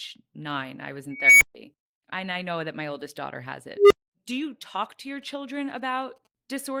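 An unstable filter, a recursive stage whose output grows without limit, hits at 1.11–1.55 s after "I was": a tone around 2 kHz swells over 0.3 s, clips, then drops out for 0.14 s. It recurs at 3.76–4.13 s after "my oldest daughter has", this time a tone around 400 Hz building over 0.15 s and followed by 0.23 s of silence.

From 4.84 to 6.27 s, GSM signalling bursts from a nearby 2G phone are rectified into the audio, giving a faint galloping dit-dit-dit of short buzzes at 217 Hz, well below the speech.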